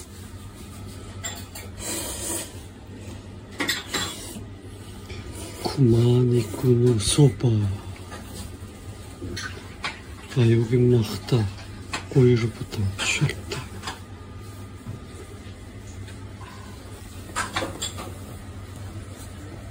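At 9.36 s the sound jumps abruptly forward with a brief blip, as though a stretch of the programme had been cut out. This is likely a stream segment skipped: one chunk failed to load and playback resumed at the next. Unlike a dropout, there is no silent gap.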